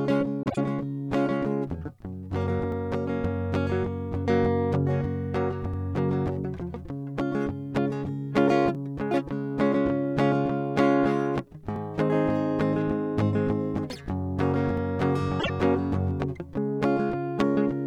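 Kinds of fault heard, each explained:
frames out of order: A brief garbled flutter, at 0.43 to 0.58 s and again at 15.39 to 15.50 s. Two neighbouring runs of music, 52.2 ms and 26.1 ms each, were decoded in swapped order, so no time is lost.
overlapping chunks: A tiny stutter-click recurs every 3.0 s, at 2.72, 5.74, 8.75, 11.76 and 14.77 s. The music was handled in 3-second chunks, each starting slightly before the previous one ended, so 13.06 ms plays twice at every join.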